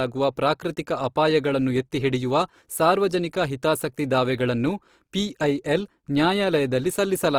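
Across the whole recording the speech sounds rough and grainy, with a noisy texture laid over the tonal parts of each sound rather than a watery swirl. The bandwidth stays wide, with nothing above 20.4 kHz. This is likely Opus compression at a low rate, fitting about 24 kbps, in its full-band music mode, where starved bands are filled with folded or noise-like content, so the damage stays plainly audible throughout.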